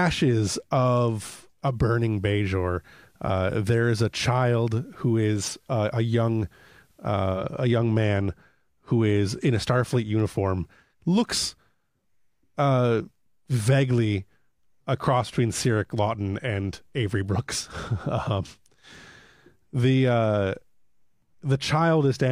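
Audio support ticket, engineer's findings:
Faint hiss rises and level dips about 1 dB, 1.65–7.46 s, with smooth 132 ms cross-fades in and out. Digital radio blending to analogue: hybrid receiver lost the digital stream, faded to the station's FM broadcast, then back. Hiss roughly 45 dB down.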